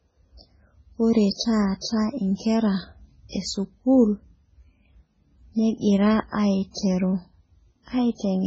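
Speech, with heavy MP3 compression damage throughout the clip. Nothing remains above 7.7 kHz, where the encoder has cut the treble at a fixed frequency, so the sound is dull and band-limited. Weak spectral detail is discarded and flickers between frames, giving a watery, swirly texture to the sound. The depth of the damage fits a very low bitrate around 16 kbps, likely an MP3 encode starved of bits.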